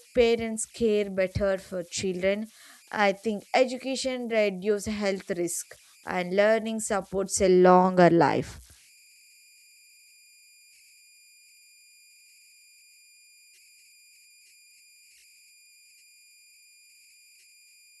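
Throughout the speech, converter idle tones sit about 32 dB below the signal. An undithered delta-sigma converter, fed very small input levels, settles into repeating bit patterns, and those cycles produce a faint whistle somewhere around 2 kHz that surfaces in pauses and turns to a grainy hiss under quieter passages. On a spectrogram it shows as a thin horizontal line near 2 kHz, clearest between phrases; the waveform's near-silent stretches carry low-level ripple instead of flat baseline.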